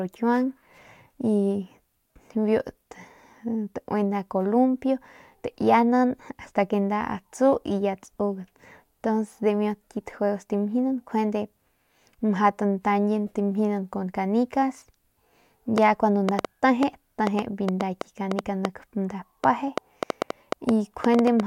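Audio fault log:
15.78–21.41 s, train of clicks: a run of around thirty same-shaped pops at about 4.45 per second, unevenly spaced and peaking roughly 15 dB above the speech, ticking right through the pauses too. Likely something injecting pulses, like nearby equipment or a faulty connection.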